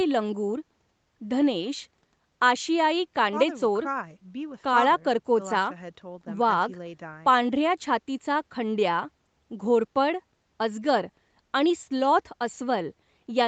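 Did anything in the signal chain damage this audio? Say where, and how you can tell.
No, the speech reaches the listener intact, with its content ending at about 8 kHz as expected from the call's microphone processing and the wideband codec on the call path, and nothing in the chain has added damage beyond that normal band limit.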